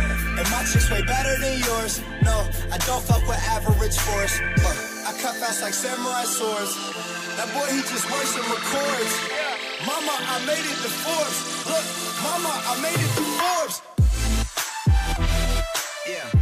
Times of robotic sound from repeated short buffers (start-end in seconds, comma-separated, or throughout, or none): none